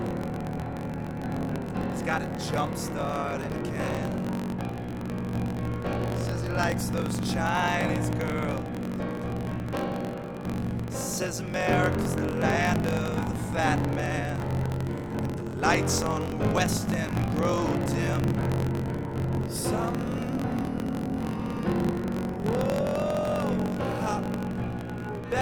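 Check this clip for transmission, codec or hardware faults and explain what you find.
Two faults are audible: a block size mismatch (truncated) that runs for the whole clip, and a brief burst of mains buzz.

Block size mismatch (truncated): Throughout, the end of each block is discarded, which fits 1024-sample reads. This causes a 46.9 Hz buzz and playback 1.12 times fast at normal pitch. The waveform shows regular splice discontinuities.

Mains buzz: From 13.48 to 14.81 s, a faint, raspy 60 Hz buzz well below the signal comes from switching spikes. A spectrogram shows stacked harmonic lines reaching several kHz.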